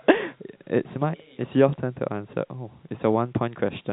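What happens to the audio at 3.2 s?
Nothing goes wrong at 3.2 s: the speech continues intact through that moment, carried on its telephone-band G.711 coding with nothing above 3.9 kHz.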